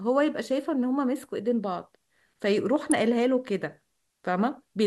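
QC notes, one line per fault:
2.91 s, electrical switching spike: a sharp snap, a few milliseconds long, lands on top of the speech and peaks fairly high, around -10 dBFS. It is likely an arc from a nearby switch, motor or static discharge, picked up by the audio line.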